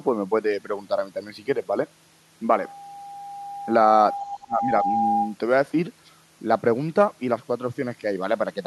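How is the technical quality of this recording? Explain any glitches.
Two faults affect the quality of the recording, and they overlap in the middle of the clip.

From 2.56 s to 5.35 s there is loudspeaker feedback squeal: a steady 803 Hz tone that swells gradually over roughly three seconds until it is about as loud as the speech. The microphone is picking up a loudspeaker that carries its own signal, and at 803 Hz the round-trip gain exceeds unity, so each pass reinforces the tone until the loop is broken.

Between 4.23 s and 4.89 s the speech itself dips, sinking by roughly 20 dB at its deepest and affected for about half a second in total. This is speech suppressed in double talk. The likely cause is an echo canceller that could not separate the local talker from the loudspeaker return and attenuated both while the far end was active.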